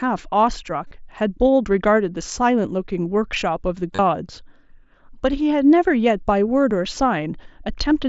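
At 0.88 s there's a short stretch of concealed Bluetooth headset packet loss, about 45 ms of missing audio between headset and phone. The receiver bridged it by repeating the closest-matching recent waveform, so you get a brief buzzy, held tone and a slight warble as the real speech picks back up. Around 3.93 to 3.99 s the losses are scattered over 60 ms, with the longest run about 30 ms, giving a similar buzz. At 6.96 s a single lost frame is patched almost invisibly, all over the mSBC wideband link.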